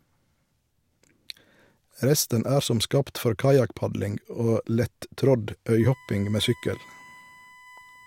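From 5.80 s right through to the end, a thin fixed-pitch whine sits under the speech. It's USB whine: the bus pulls current in 1 ms frames, and that ripple is leaking into the audio through shared power or ground. That's why it lands on 1 kHz, with its strongest part at the 2 kHz harmonic. It stays well below the speech, roughly 25 dB down.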